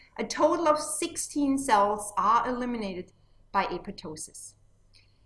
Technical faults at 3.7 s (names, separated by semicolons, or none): none